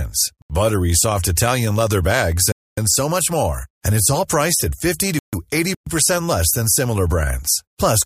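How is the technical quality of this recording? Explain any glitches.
The speech is interrupted by four short dropouts to silence. Three have the same cause and one has a different cause.

At 0.42 to 0.50 s, 2.52 to 2.77 s and 5.19 to 5.33 s, the sound cuts out for 79 ms, 255 ms and 141 ms. These are likely Bluetooth stalls. Radio interference held back packets, the headphone buffer emptied, and playback resumed once the resent data arrived.

At 5.75 to 5.87 s, a 120 ms gap is likely a playback stall. The player itself ran out of data or was blocked, rather than the wireless link failing. It sounds just as abrupt.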